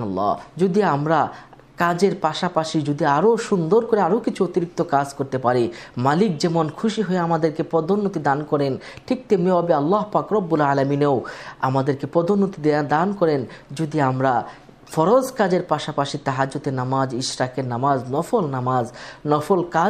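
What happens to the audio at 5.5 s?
Nothing goes wrong at 5.5 s; the audio plays through that moment intact, with no dropout, click, glitch or other fault to be heard.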